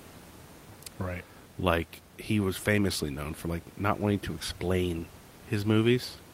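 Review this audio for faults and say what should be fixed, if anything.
Nothing in this audio needs fixing, since reviewing it turns up no faults.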